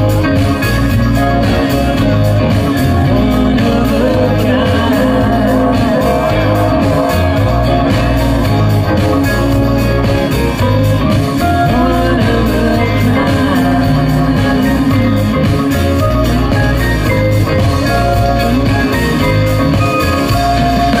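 Nothing in the audio stood out as a technical problem on listening.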